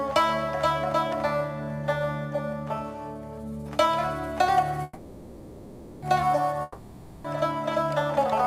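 Packets likely stalled and the jitter buffer ran dry, a call audio freeze, so from 4.83 to 6.04 s the last sound is stretched into a fading buzz before the audio resumes intact, 1.19 s late. A long network dropout likely follows, with nothing arriving from 6.62 to 7.26 s; the same fading fill covers the gap, and the 0.62 s of audio underneath is lost.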